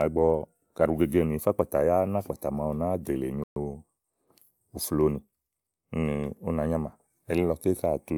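At 3.44 s a Bluetooth stall likely emptied the headphone buffer while packets were delayed, so the speech drops to silence for 125 ms before resuming at 3.56 s.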